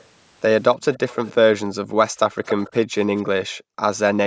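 An echo canceller at a loudspeaker end likely failed to remove everything its microphone picked up. The result is an echo leak: a copy of the speech returns 284 ms late. It is a faint scrap at 0.00–0.04 s, grows clearer at 0.94–1.32 s, and is plainly audible at 2.48–2.76 s, only about 15 dB below the speech. At 1.84–1.98 s and again at 3.36–3.81 s, the canceller clamped the microphone while the loudspeaker played. This background gating by the echo canceller makes the room sound dip by about 28 dB and then about 40 dB before it returns.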